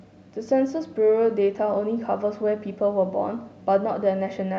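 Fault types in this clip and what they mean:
There are no fault types in this clip.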